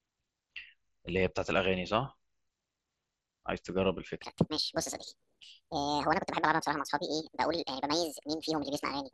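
Speech recorded through what sounds like a Bluetooth headset on mSBC, with the band topping out around 8 kHz and a touch of grain on louder syllables. The problem is a section at the wrong speed: from 4.22 s to the end at 9.14 s, playback jumps to 1.58 times normal, so the voice suddenly turns hurried and sits about seven semitones higher. That's likely the section being played against the wrong clock.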